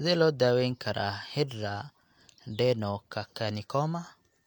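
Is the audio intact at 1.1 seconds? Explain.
Yes, at 1.1 seconds the speech plays through intact, with no dropout, click, distortion or other fault at that moment.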